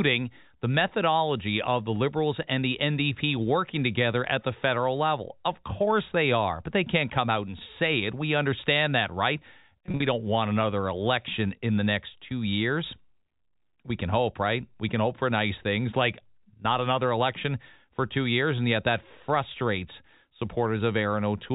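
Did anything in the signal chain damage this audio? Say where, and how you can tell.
Yes, network packet loss with pitch repetition: between "understand that right" and "don't want another election" (9.86–10.02 s), repeated pitch periods fill about 110 ms of gaps, sounding briefly held and buzzy.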